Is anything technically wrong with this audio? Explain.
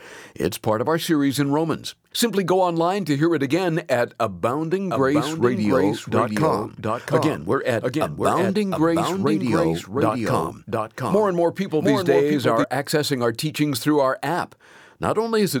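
Yes. From 4.90 s to 12.64 s there is a doubled audio track: a second, full-band copy of the speech runs about 0.7 s behind, roughly 5 dB quieter, likely from a slower capture path. Unlike an echo, it neither decays nor adds room colour, and it switches on and off abruptly.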